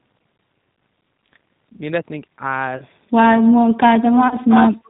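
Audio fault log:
Throughout: G.729 codec. The speech sounds slightly rough and synthetic, with nothing above 4 kHz, and the coding damage is plainly audible. At 8 kbit/s the decoder rebuilds each 10 ms frame from a vocal tract filter, a pitch predictor and a few pulses, so fine detail is lost.
2.77–2.82 s and 4.28–4.38 s: VoIP packet loss concealed by the speech codec. Twice the sound smears briefly and fades. Each time about 30 ms of audio went missing, and the decoder stretched its last pitch and filter with falling gain. The second dropout takes longer to recover.
3.48–4.51 s and 4.71–4.85 s: speech suppressed in double talk. Over about 0.7 s in the first span the speech dips, thins and breaks up, falling by as much as roughly 40 dB. The second span is a shorter, shallower dip of about 10 dB. The likely cause is an echo canceller turning down the talker while the far side was also speaking.
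4.48–4.89 s: echo leak. A delayed copy of the speech trails in about 337 ms behind, only around 5 dB below the direct sound. Part of the loudspeaker signal was likely picked up by a microphone and returned without being fully cancelled.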